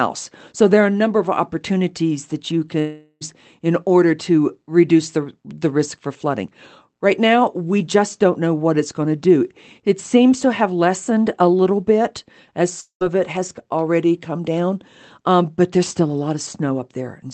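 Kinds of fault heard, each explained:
long network dropout: Packets likely stopped arriving for a stretch, leaving the receiver nothing to decode, so it extended the last sound it held to cover the gap. From 2.79 to 3.23 s about 0.42 s is lost, replaced by a fading buzz or hiss; from 12.81 to 13.03 s about 0.2 s goes the same way, trailing into brief silence. Each time the sound resumes with that portion simply gone.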